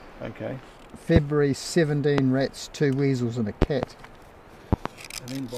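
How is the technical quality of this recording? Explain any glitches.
The recording is marred by loud pops at four points. Single pops fall at 1.16–1.19 s and 2.18–2.21 s, and double pops at 3.62–3.86 s and 4.73–4.89 s. Each is a sharp, thump-like pulse peaking about 20 dB above the surrounding sound, which carries on underneath. The likely cause is a sudden voltage step, from a plug, switch, static discharge or driver glitch, that the following circuitry shapes into a brief burst.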